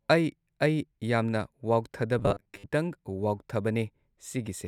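From 2.19 to 2.73 s, robotic sound from repeated short buffers: a rigid 100 Hz buzz, likely from 10 ms chunks replayed for about half the audio, fixed regardless of the speaker's own pitch.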